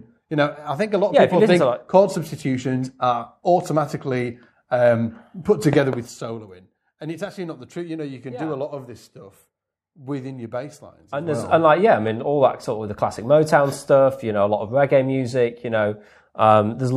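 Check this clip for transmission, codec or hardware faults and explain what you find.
One fault appears. Zipper noise, 5.74 to 6.11 s: a roughly 15 dB level drop taken in 1 dB steps, about forty per second, each step clicking, so the fade ticks audibly.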